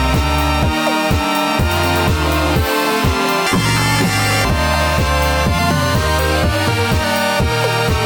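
From 3.47 to 4.47 s the music jumps an octave higher and takes on a rapid flutter at about 47 Hz, then returns to normal pitch. This is planar audio read as interleaved. Each block holds all of the left samples followed by all of the right, but it was read as alternating left-right pairs. The left half of each block plays at double speed, then the right half, so the pitch rises an octave while the overall pace holds. The switching every 21.33 ms, which fits a 1024-sample block, produces the flutter.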